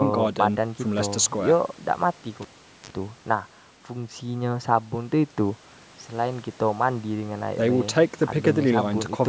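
A speech recording with a cable pulled and plugged in between 2.42 and 2.91 s. A pop is followed by about 435 ms of near silence. Then comes a 43 ms burst of 50 Hz mains buzz as only the plug tip makes contact, and a second pop as the signal returns. On the waveform this shows as two sharp spikes around a flat gap, with a short hum block just before the second spike. On a spectrogram, the spikes are vertical broadband lines and the buzz is a stack of 50 Hz harmonics. The spectrogram is empty above 8 kHz throughout, as expected from call microphone processing.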